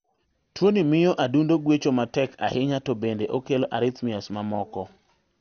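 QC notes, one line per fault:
Throughout: MP2 compression, likely. The speech sounds dull and granular, with a gurgling edge and nothing above 6.5 kHz. Too few bits per sub-band switches off the upper bands and coarsely quantises the rest, which fits a rate near 48 kbps.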